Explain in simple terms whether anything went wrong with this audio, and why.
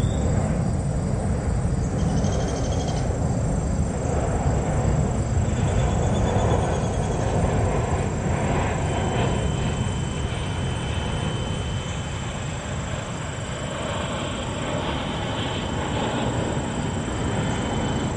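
Feedback whistle, from 8.74 s to the end of the clip at about 18.2 s. A thin, steady tone at 3 kHz sits behind the sound, fainter than the main audio, swelling and fading slowly in loudness. The likely cause is a loudspeaker feeding back into a microphone: the sound went round that loop and built up at one high pitch, sitting right at the edge of feedback so it kept ringing without growing into a full howl.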